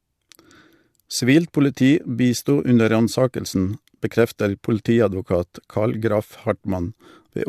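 No technical faults can be heard.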